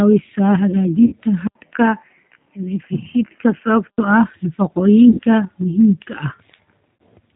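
Throughout, the speech carries G.729 codec damage at 8 kbit/s: band-limited below 4 kHz, with a rough, slightly synthetic buzz from pulse-based excitation. This differs from simple low-pass filtering, which dulls the sound without this grainy, artificial texture.

VoIP packet loss concealed by the speech codec occurs at 1.06–1.14 s (60 ms lost), at 5.10–5.20 s (90 ms lost, just before "muhiimka ah"), and at 7.01 s (60 ms lost). Instead of silence or a click, as with a plain dropout, the decoder stretches the last sound into a fading buzzy tone or coloured noise, leaving the speech weak as it resumes.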